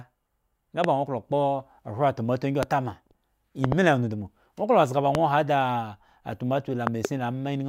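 Loud pops interrupt the speech five times: single pops at 0.84–0.86 s, 2.63–2.65 s and 5.15–5.17 s, and double pops at 3.64–3.74 s and 6.87–7.07 s. The first peaks roughly 15 dB above the speech and the rest roughly 20 dB. Each is a short, sharp transient laid over the speech, which continues underneath. The likely cause is a voltage spike, such as a switch, connector or static discharge, reaching the signal chain.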